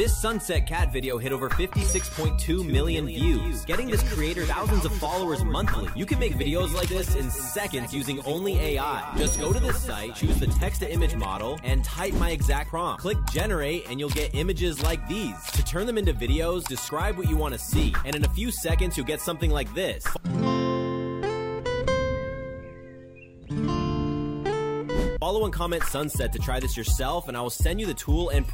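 From 2.48 s to 11.24 s, a doubled audio track appears. A second full-band copy trails the original by roughly a fifth of a second, about 10 dB quieter. It has no decay or room colour. It starts and stops abruptly. A slower second capture path is the likely cause.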